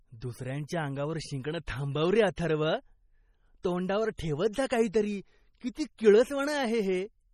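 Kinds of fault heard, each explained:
MP3 compression: The speech sounds heavily coded throughout, watery and swirly, with metallic chirping on s sounds and blurred consonant onsets. The likely cause is an MP3 encoder starved of bits, consistent with a low bitrate around 32 kbps, dropping weak frequency lines and letting others flicker between frames. On a spectrogram the energy stops sharply at 16.5 kHz, and the upper bands look patchy, with isolated blocks appearing and vanishing from frame to frame.
Pre-echo: At 4.17 s a brief hiss, spread over about 16 ms, arrives just before a sharp attack, so the onset sounds softened rather than crisp. This happens because the transform block containing the attack spreads its coding noise across its whole length, filling the quiet moment ahead with noise sized for the loud part. A waveform shows a fuzzy lead-in before the transient. A spectrogram shows a thin broadband smear just ahead of the onset.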